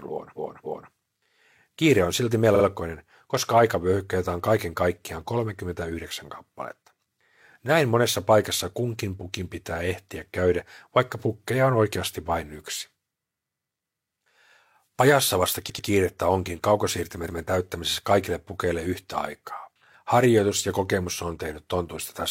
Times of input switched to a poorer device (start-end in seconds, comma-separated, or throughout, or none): none